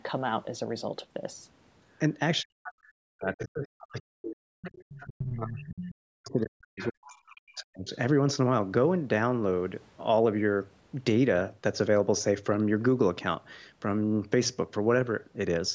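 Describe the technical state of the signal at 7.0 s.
Speech suppressed in double talk runs from 5.05 to 7.88 s. The talker's speech dips sharply, by around 40 dB at its deepest, and thins or breaks into fragments. This is likely an echo canceller that couldn't tell near speech from loudspeaker echo and attenuated everything.

Overlapping this, the other side's voice leaks through from 6.79 to 7.16 s as a faint second voice, roughly 15 dB below the speech. It is likely loudspeaker playback that the echo canceller failed to remove from the microphone.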